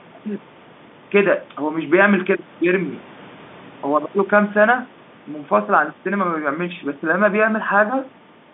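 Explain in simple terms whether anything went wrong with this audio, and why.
Nothing went wrong here.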